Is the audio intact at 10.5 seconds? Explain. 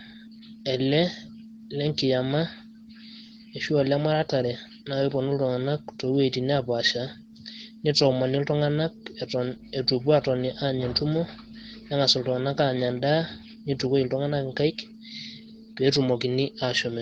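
No. At 10.5 seconds, a mains hum is present from 9.50 to 12.15 s. Power-line current is leaking into the signal path, probably through a ground loop or a nearby transformer, and adds a steady 50 Hz tone with a few low harmonics. It sits about 25 dB below the speech: a constant, dull drone under the talking.

The whole clip, including this moment, also carries Opus voice compression at 16 kbps in hybrid mode. The linear-prediction layer codes the lower band and the CELT layer the top, in 20 ms frames. At that rate the excitation is coded coarsely, so the damage is plainly audible: the speech sounds hoarse and slightly robotic.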